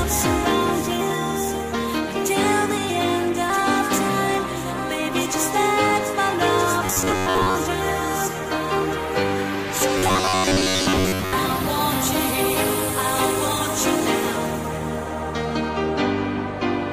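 Robotic sound from repeated short buffers occurs at 6.86 to 7.55 s and 9.98 to 11.35 s. Most of the audio becomes a rigid metallic buzz at 94 Hz, likely from late-arriving data being covered by looping the last 11 ms fragment.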